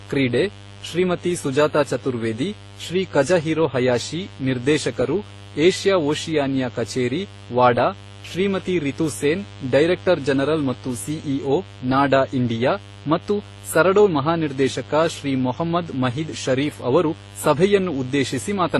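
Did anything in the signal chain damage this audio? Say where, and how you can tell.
Yes. A steady, raspy buzz runs under the speech for the whole clip, sitting about 20 dB below it. It has a rough, spiky edge rather than a smooth hum, and its 50 Hz fundamental and many harmonics climb well into the kilohertz range. This points to the analogue wiring stage. A dimmer, rectifier or poorly shielded cable injects sharp switching spikes twice every mains cycle, and those spikes carry a dense harmonic series.

At the codec stage, the speech has a mixed set of compression artefacts heard together throughout, and a hard ceiling with nothing above 12.1 kHz. The damage doesn't sound like a single codec's signature. It is most likely transcoding between lossy codecs. The mix of artefacts fits low-bitrate AAC and Opus encodes followed by a final WMA pass. Each later encoder spends bits on the earlier artefacts, adds its own, and keeps the lowest cut-off in the chain.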